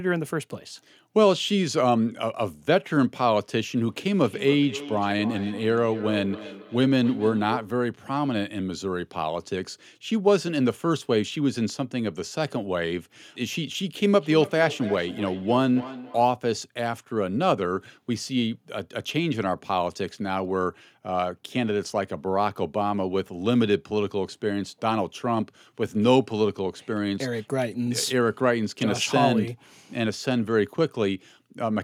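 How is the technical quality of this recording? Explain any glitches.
The recording has one recurring fault: feedback echo between two devices, from 4.17 to 7.89 s and from 14.19 to 16.45 s. A second device replays the speech into a live microphone. Each word returns about every third of a second, thinner and ringing, peaking about 13 dB below the speech.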